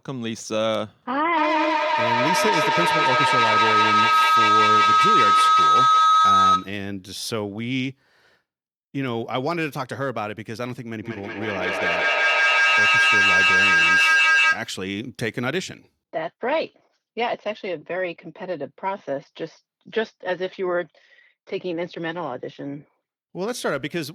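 A speech recording is interrupted twice by feedback howl, from 1.37 to 6.88 s and from 11.03 to 14.81 s, peaking about 8 dB and about 7 dB above the speech. A shared-room loop between microphone and loudspeaker gains level each pass, so the repeats swell and narrow to a single tone near 1.5 kHz, with the loop repeating roughly every fifth of a second. Unlike ordinary echo, whose copies fade, this sound keeps rising and becomes a pitched whine.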